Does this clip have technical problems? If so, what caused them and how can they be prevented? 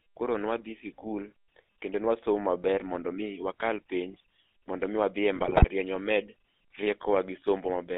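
Yes. The speech carries GSM full-rate codec damage from start to finish. The band is limited to roughly 250 Hz to 3.6 kHz, and the voice has a plainly audible buzzy, gravelly roughness. That grit is what sets it apart from plain telephone band-limiting, which sounds muffled but smooth. The roughness comes from rebuilding the voice as a vocal-tract filter driven by a sparse, regularly spaced pulse excitation, and the result fits the old 13 kbps full-rate coder. To prevent it, carry the call over a wideband or modern codec such as AMR-WB or EVS instead of GSM full rate.

From 5.36 to 5.65 s there is a burst of GSM bit errors. The voice breaks into squawks, pops and gargling. This happens because corrupted filter, pitch and gain values reach the decoder and warp or overdrive each affected frame. Packet loss would instead leave gaps or smeared repeats, so the erratic sound here points to bit errors. 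To prevent it, keep the radio link strong enough that the channel coding can correct the errors before decoding.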